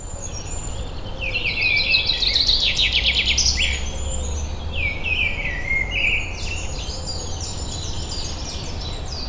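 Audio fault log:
No fault appears in this audio fault log.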